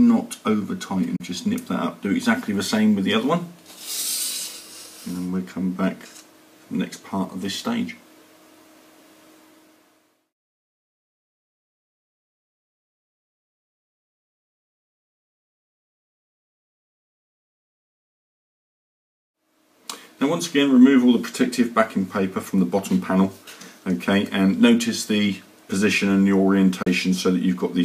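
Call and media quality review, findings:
Digital broadcast dropout at 1.16–1.21 s and 26.82–26.87 s: sound fades out over 8 ms and mutes, about 32 ms lost each time, fitting a single failed frame; receiver muting.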